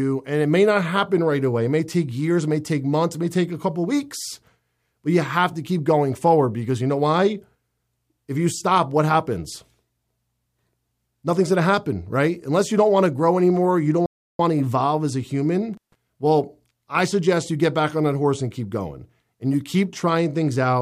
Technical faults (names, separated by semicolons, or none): playback stall; intermittent contact